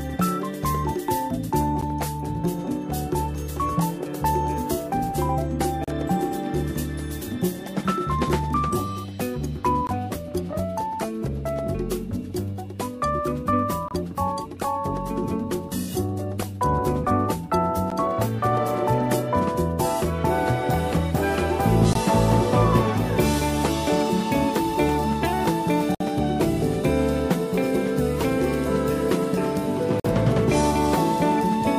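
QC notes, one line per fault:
1.81 to 30.05 s, gap between stream segments: hard-edged holes of silence at 1.81, 5.84, 9.87, 13.88, 17.90, 21.93, 25.95 and 30.00 s. They last about 12, 34, 20, 25, 13, 21, 56 and 47 ms. They recur every 4 seconds, which fits 4-second segments whose timestamps leave a short gap at each boundary. The player fills each gap with silence, so the sound drops out abruptly and resumes without losing any material.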